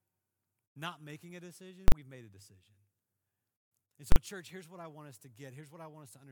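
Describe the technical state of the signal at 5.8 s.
At 5.8 s the speech signal is intact, with no audible fault at that moment.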